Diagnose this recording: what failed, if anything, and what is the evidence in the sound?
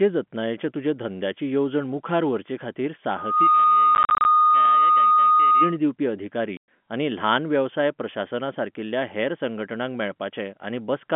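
After "धंद्याची येवजण मुखार व्हरचेखातीर", a steady 1.2 kHz tone swells within about 0.3 s and sits well above the speech from 3.16 to 5.77 s. This is loudspeaker feedback squeal: an acoustic loop through microphone and speaker whose gain exceeds one.

Hard-edged silent holes are scattered through 3.95–4.25 s, and one solid 110 ms gap follows "दिवपी अधिकारी" at 6.57 s. This is network packet loss filled with silence, with gap lengths that fit 10 ms packets.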